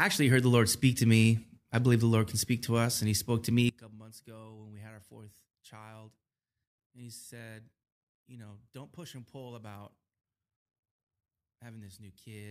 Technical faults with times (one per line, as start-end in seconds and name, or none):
3.69-12.50 one channel inverted